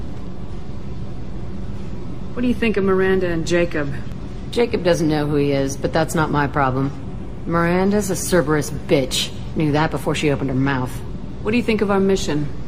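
There's a DC step in this sound: at 4.12 s the waveform's zero line jumps by about -21 dBFS, giving a low thump, and the offset holds until 12.19 s, when it drops back with a second thump. The sound itself carries on unchanged throughout.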